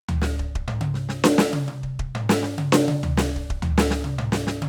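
The music carries no audible technical faults at any point in the clip.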